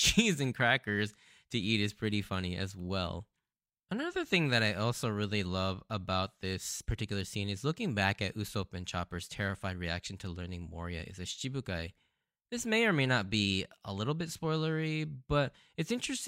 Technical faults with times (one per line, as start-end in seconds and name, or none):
none